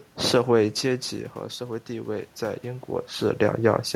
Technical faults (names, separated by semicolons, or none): automatic gain rising